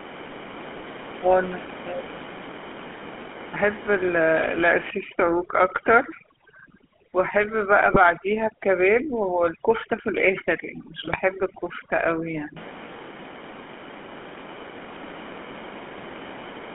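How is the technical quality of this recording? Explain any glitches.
The quality is poor. The whole recording carries plainly audible telephone-codec coloration, and in its middle section there are signs of aggressive denoising and two brief decoder glitches.

GSM full-rate codec, throughout: the speech is confined to roughly 200 Hz to 3.4 kHz and has a buzzy, gravelly texture. That comes from the codec rebuilding the voice from a vocal-tract filter driven by sparse, regularly spaced pulses, which fits a 13 kbps full-rate stream. A plain band-limited line would sound thin but not rough.

Overdone noise removal, 4.90 to 12.57 s: the room noise, otherwise about 13 dB below the speech, drops and breaks up into twinkling specks. Quieter parts of the speech are gated out along with noise-like bands. Unlike a codec dropout, this effect persists steadily across the whole stretch.

GSM bit errors, 7.86 to 7.97 s and 11.06 to 11.18 s: each is a short squawk-and-gargle burst about a tenth of a second long. 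Corrupted filter, pitch or gain values distort the spectrum and level over a handful of frames. Packet loss would leave gaps or repeats instead of these harsh tonal bursts.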